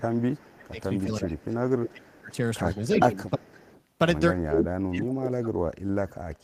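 From 0.0 to 0.83 s the speech dips by up to about 25 dB: speech suppressed in double talk, likely an echo canceller attenuating the near talker during overlap. An echo leak follows at 0.57 to 0.68 s, a faint copy about 25 dB down and delayed 0.34 s, likely residual loudspeaker pickup the canceller missed. A stronger leak, about 10 dB below the speech, runs from 0.99 to 1.91 s. Suppression recurs at 1.23 to 1.5 s (about 20 dB) and 1.89 to 2.39 s (about 30 dB). Another leak, about 25 dB down, runs from 2.67 to 3.83 s. Suppression returns at 2.98 to 3.48 s (about 25 dB) and from 4.43 s to the end (about 30 dB).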